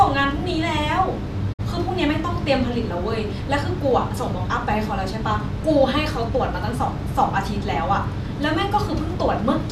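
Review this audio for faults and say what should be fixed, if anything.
At 1.52 s the speech briefly fades out over about 20 ms and falls silent, coming back at 1.61 s with the programme having moved on. This is a digital broadcast dropout. The receiver stopped getting frames it could decode and muted its output until valid frames returned. The gap, including the fade, fits roughly two lost frames, with about 48 ms of transmitted audio simply missing. To prevent it, improve reception margin at the receiver with better antenna placement or a stronger signal, and use a multiplex with more robust error protection.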